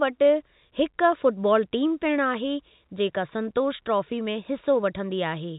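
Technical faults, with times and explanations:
No technical faults in this speech clip; it is carried over G.711 telephone coding, which works as expected with the top end stopping at 4 kHz.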